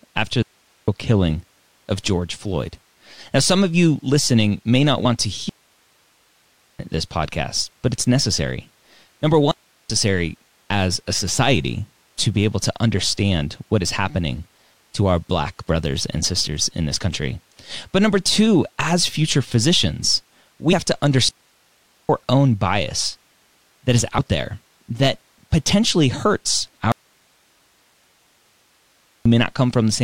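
A digital wireless link in this speech recording loses too much data four times, and the receiver mutes to clean near-silence with no noise burst: a digital wireless dropout at 0.43–0.88 s before "killing of", 5.49–6.79 s before "this podcast but it's", 9.51–9.90 s, and 21.29–22.09 s. The wanted signal then goes missing from 26.92 to 29.26 s, likely because the source was lost while the downstream path stayed live. That leaves an audio dropout to a faint residue right after "there that potentially hurts", where the abrupt gap holds only hiss about 40 dB below the speech.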